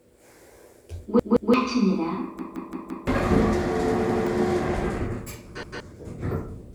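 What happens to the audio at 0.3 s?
Nothing goes wrong at 0.3 s: the sound plays through cleanly there, with no dropout, click, distortion or other fault.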